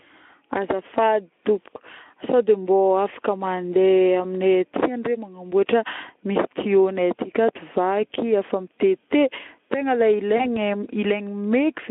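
At 10.38 s a brief run of VoIP packet loss concealed by the speech codec begins: a gap that fits a single lost 20 ms frame forced the Speex decoder to rebuild the missing audio by extending its last pitch and filter state at falling gain. That stretches the speech into a short buzzy or noisy, smeared patch, and because each following frame builds on the guessed state, the sound stays thin and distorted until about 10.57 s.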